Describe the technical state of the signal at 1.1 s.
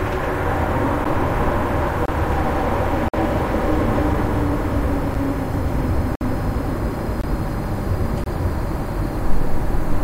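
A gap between stream segments occurs at 1.04 s. A segment boundary leaves about 10 ms unfilled, so a hard-edged silent hole interrupts the sound.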